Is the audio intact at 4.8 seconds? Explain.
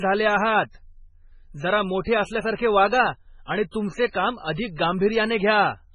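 No. From 4.76 to 4.78 s there's pre-echo: a hiss smeared about 23 ms ahead of a sharp onset. The codec spread its noise across the whole block, so noise sized for the loud attack leaks into the quiet just before it, softening the hit.

Around that moment the speech also has heavy MP3 compression, likely the cause of the pre-echo. Nothing comes through above 10.2 kHz, and the dull, watery texture fits a very low bitrate around 16 kbps, with sibilants turning swirly as weak frequency lines drop in and out.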